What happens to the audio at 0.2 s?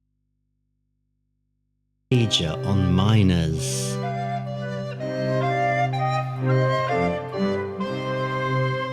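At 0.2 s there is only a low mains hum, about 50 dB below the signal, until it returns abruptly at 2.12 s. This audio dropout to a faint residue likely comes from the signal being lost while the input path stayed live.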